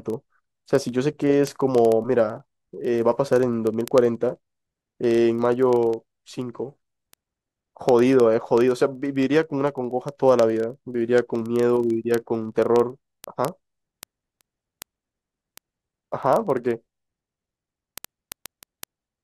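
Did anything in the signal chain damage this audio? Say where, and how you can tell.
Yes: a digital link whose receiver wasn't locked to the sender's word clock, producing word clock ticks. The slipping clocks drop or repeat a sample roughly every 30 ms, giving steady sharp ticks from 0.10 to 19.21 s.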